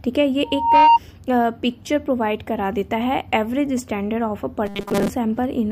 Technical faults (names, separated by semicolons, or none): loudspeaker feedback squeal; robotic sound from repeated short buffers